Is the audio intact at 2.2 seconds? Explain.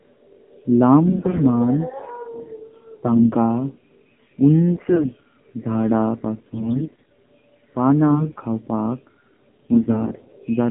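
No. At 2.2 seconds the speech carries AMR narrowband mobile codec damage, which runs through the whole clip. The codec rebuilds the voice from a vocal-tract model fed by sparse pulses, and the buzzy, synthetic quality points to a low mode of about 7.4 kbps. A spectrogram shows energy confined between 150 Hz and 3.4 kHz, with a hard empty ceiling above.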